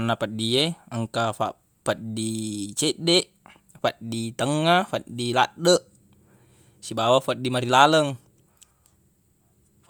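From start to finish the speech has a plainly audible breathy, grainy edge up top. That's likely Bluetooth LC3 compression, thinning out the upper spectrum and patching it with noise. It fits a 48 kbps stream in 10 ms frames, with nothing above 20.1 kHz.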